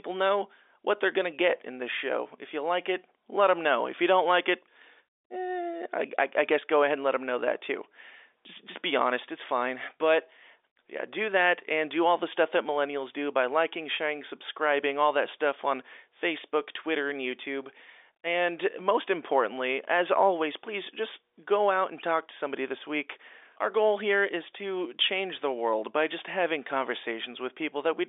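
No technical faults can be heard in this speech. It comes over an ordinary G.711 telephone path, so the sound sits in the usual line band of roughly 300 Hz to 3.6 kHz with nothing above about 3.7 kHz.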